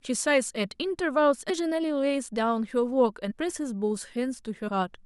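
Compressed frames skipped at 1.49 s, 3.30–3.32 s and 4.67–4.69 s: the speech jumps ahead by about 400 ms, about 70 ms and about 150 ms, which fits whole lost frames of roughly 23.2 ms. Unlike a dropout, no silence is inserted.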